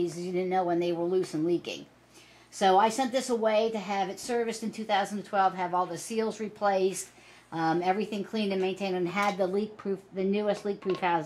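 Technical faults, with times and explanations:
9.55–11.25 s, de-emphasis applied wrongly: for the final stretch the top end rolls off smoothly, reaching about 8 dB down at 10 kHz relative to 1 kHz. A treble-cut filter meant to reverse pre-emphasis was applied either where none existed or a second time, so the sound turns dull and muffled.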